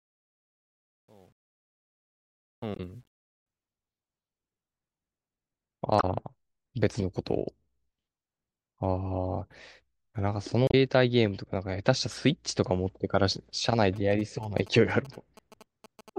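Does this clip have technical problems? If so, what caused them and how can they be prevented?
Yes. The speech fades in over the first 3.5 s, and from 0.0 s to 3.46 s the fade carries truncation distortion. The quietest part, from 0.0 s to about 2.6 s, is worst: the waveform collapses into a few coarse steps, so the sound turns gritty. This fits a fade computed at roughly 10-bit resolution and rounded without dither. Prevention: apply fades at 24-bit or floating-point precision and add dither before any reduction in word length.

Damaged data in the compressed stream causes three brief glitches, at 2.73 to 2.80 s, 5.97 to 6.04 s and 10.67 to 10.74 s, each about 70 ms long. At each one the decoder hit corrupted bytes, lost frame sync and searched for the next valid header, so the audio is disrupted there. Prevention: use a transport or storage path with error checking and retransmission, and verify file integrity before decoding.

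GSM signalling bursts appear from 13.96 s to 16.10 s as a galloping dit-dit-dit of short buzzes at about 217 Hz, roughly 20 dB below the speech. A nearby 2G phone was exchanging signalling with the network, and the audio circuitry rectified its RF pulses into the audible burst pattern. Prevention: keep phones away from microphones, cables and interfaces during recording, or switch them to airplane mode.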